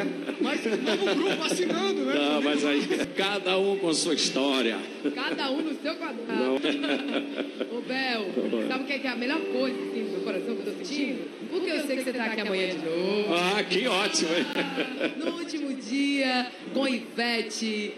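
Damaged data in a compressed stream appears at 3.04 s and again at 6.57 s. Corrupted bytes make the decoder misread those frames and lose sync, so it hunts for the next valid frame header, leaving a brief chirp or blip in the audio each time.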